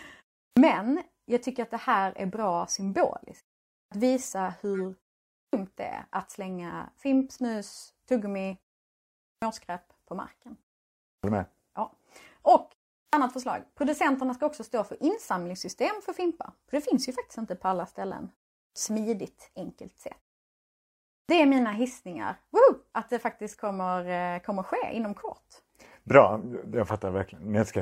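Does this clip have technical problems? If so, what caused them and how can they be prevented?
Yes. Clipped starts after a pause occur at 0.46, 3.81, 5.43, 9.31, 11.13, 13.02, 18.66 and 21.18 s. Each time, about 100 to 110 ms of the onset is lost after a gap of 0.3 to 1 s, because the output device drops into a sleep state during the silence and takes that long to wake. On a waveform, the sound jumps abruptly from flat silence to full level with no natural rise. Preventing it means disabling the device's idle power-saving, or feeding it a continuous low-level signal so it never sleeps.

Corrupt frames were decoded at 4.75 to 4.80, 7.77 to 7.82, 22.10 to 22.23 and 23.47 to 23.55 s. These are brief chirps or noise bursts peaking around -30 dBFS, with the one at 22.1 s fainter at around -50 dBFS. They come from damaged compressed frames that the decoder played instead of rejecting. On a spectrogram they show as short vertical smears of energy at frequencies unrelated to the surrounding sound. 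Checksums on each frame, with concealment of any frame that fails, would stop these bursts from reaching the output.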